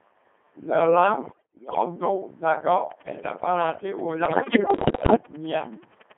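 Across the whole clip the speech has passed through the Codec 2 vocoder, heavily. Its robotic, buzzy quality fits the 2.4 kbit/s mode. Instead of keeping the waveform, the decoder rebuilds each frame from sine waves driven by transmitted pitch, voicing, energy and envelope. On a spectrogram the harmonics look like neat, ruler-straight combs with smeared noise between them, confined to a band from 200 Hz to 3.4 kHz with nothing above or below. The waveform is periodic and synthetic rather than natural.

From 1.24 to 1.86 s come bit errors on digital voice radio. Roughly a tenth of the received bits are wrong, and because each bit steers a whole frame's pitch, level, voicing or spectrum, the synthetic speech lurches. It jumps in pitch, swells and drops in level, and shifts in tone colour, breaking into warbles and bleeping gibberish. A spectrogram shows the harmonic combs abruptly changing spacing and brightness from frame to frame. 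The waveform's envelope turns blocky and erratic.

Starting at 2.73 s and running to 6.13 s, a train of clicks sits over the audio. About forty sharp, near-identical ticks arrive at a steady 10.3 per second, each about as loud as the speech peaks, and they carry on through pauses. The likely source is electrical interference from nearby equipment or a struggling interface. A spectrogram shows evenly spaced thin vertical lines spanning the band. The waveform shows regularly spaced narrow spikes.

From 4.26 to 5.16 s the bit errors on digital voice radio return, more severe, with roughly 15 percent of bits corrupted. They overlap the ticking. The speech dissolves further into robotic babble with wild pitch and level jumps, and the spectrogram's harmonic pattern scatters frame by frame beneath the click lines.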